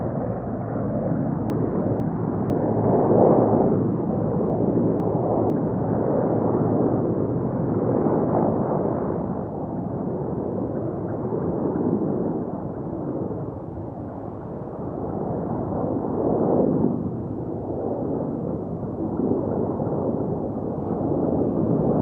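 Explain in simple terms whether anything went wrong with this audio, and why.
Something did go wrong, twice. Between 1.5 and 2.5 seconds, and again between 4.5 and 5.5 seconds, there are chunks out of order. In each spot, a half-second piece of the sound plays one slot too late, after the piece that should follow it. Nothing is missing. The order is just swapped. The sudden joins make those moments sound briefly jumbled.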